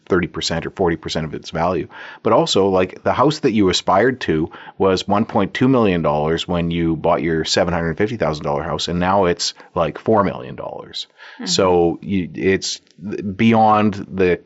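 No dropouts, glitches or other technical faults can be heard anywhere in the recording.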